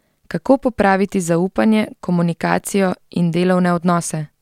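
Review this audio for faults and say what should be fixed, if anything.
Nothing here needs fixing.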